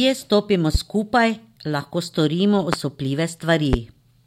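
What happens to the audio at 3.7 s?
A single loud pop hits from 3.73 to 3.76 s, well above the speech, which carries on underneath. It's likely a voltage spike from a plug, switch or static.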